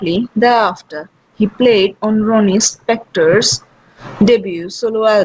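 No technical faults can be heard anywhere in the speech. It comes through a working WebRTC call path whose codec leaves nothing above 8 kHz, a band limit that fits G.722 at 64 kbps.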